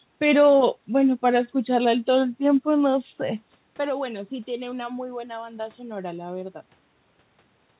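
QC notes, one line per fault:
No technical faults found.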